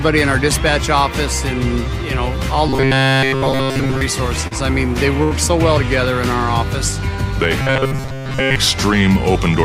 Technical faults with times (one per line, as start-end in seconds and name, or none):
2.68-4.01 robotic sound from repeated short buffers
4.47-4.54 short concealed packet loss
5.23-5.34 burst of packet loss
7.61-8.56 robotic sound from repeated short buffers